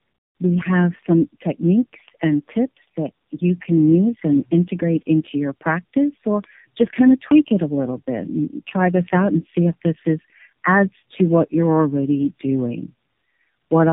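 Speech, affected throughout by tandem speech coding. The sound is rough, muffled and warbly across the whole clip. Nothing is heard above 3.7 kHz. The damage points to a call that passed through a narrowband mobile codec three times, likely AMR-NB at 7.4, 12.2 and 7.4 kbit/s, with plain telephone links between. Each border decodes the audio and codes it again. Every new coder works on the previous one's errors, so the artefacts stack up.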